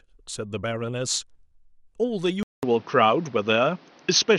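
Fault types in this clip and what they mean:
Input switched to a poorer device: after a 200 ms gap at 2.43 s, speech loses everything above 6.4 kHz, shifts level and gains faint new noise, likely a changed input.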